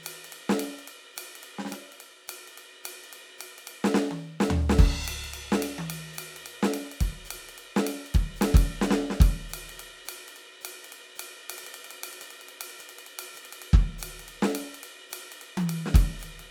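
No technical faults can be heard anywhere in the music, and the signal holds steady throughout.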